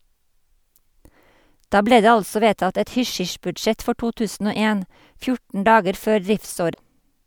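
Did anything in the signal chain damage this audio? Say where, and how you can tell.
Yes. The damage is at the codec stage, in the compressed data itself. From 6.70 to 6.80 s, near the end of the speech, there is a brief glitch lasting under a tenth of a second. That is damaged data in a compressed stream. Some bytes in the file were lost or corrupted. The decoder misread those frames, lost sync, and had to hunt for the next valid frame header before decoding cleanly again.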